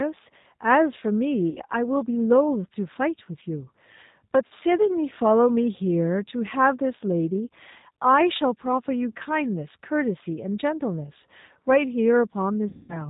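Throughout, the speech passes through the G.729 codec at 8 kbit/s, which rebuilds each frame from a vocal tract filter, pitch predictor and sparse pulses and discards everything above 4 kHz, so the audio sounds dull, rough and plainly synthetic.

VoIP packet loss concealed by the speech codec occurs three times. At 1.50 to 1.62 s, about 60 ms of audio is lost. At 4.47 to 4.53 s, about 40 ms is lost. At 12.69 to 13.06 s, about 200 ms is lost. Each time, the decoder extrapolates from its last pitch and filter with falling gain, smearing the sound into a buzzy tone or coloured noise that fades, with weak, distorted speech afterward.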